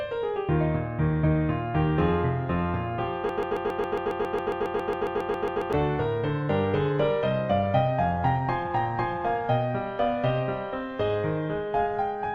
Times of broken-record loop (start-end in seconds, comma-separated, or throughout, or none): 3.29-5.73